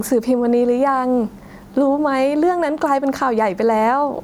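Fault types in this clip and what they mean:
Gain pumping: heard throughout, the gain swings by about 10 dB. The likely cause is input gain set far too high, with a fast limiter or compressor clamping each peak, squashing loud and soft passages together.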